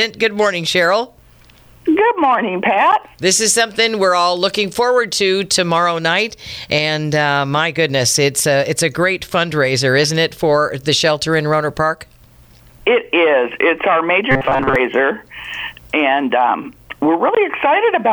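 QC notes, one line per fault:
14.31 to 14.76 s, robotic sound from repeated short buffers: the audio turns into a rigid, metallic buzz pitched at 134 Hz for most of this stretch, likely because audio arrived too seldom and a slice of about 7.5 ms was looped over the skipped material.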